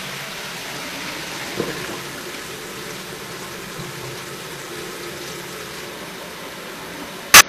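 Right at the start, from 0.28 to 0.34 s, there's a short glitch where the compressed stream has damaged data: a stretch of bytes got corrupted, so the decoder misread those frames, lost sync and had to hunt for the next valid frame header before normal playback resumed. The same thing hits again near the end, from 7.34 to 7.43 s, as another brief glitch from the same corruption.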